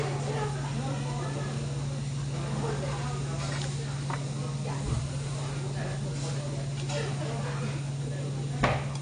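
AAC compression artefacts run through the whole of this everyday-sound recording, from start to finish. Nothing is present above 9.6 kHz, so the top end sounds dull, and the damage is plainly audible as smearing and a warbling, fizzy texture on sustained sounds. The likely cause is an AAC-LC encode at a bitrate around 32 kbps. At that rate the encoder lowers its cut-off and quantises the remaining frequency lines coarsely, leaving holes and substitute noise behind.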